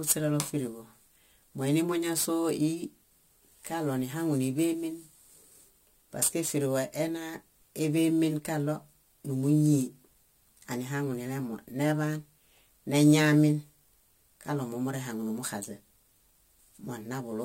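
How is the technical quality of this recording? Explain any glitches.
The recording is degraded from start to finish by a single fault: crude rate conversion. It runs for the whole speech clip, and there are no separate clicks or dropouts.

Crude rate conversion: the rate was raised by simply repeating the nearest sample, with no filtering. The pattern fits a 44.1-to-48 kHz change. This adds an inharmonic fizz roughly 20 dB below the speech that follows loud, bright syllables. A spectrogram shows stray, mirrored partials between harmonics, and the waveform shows small stair-step repeats.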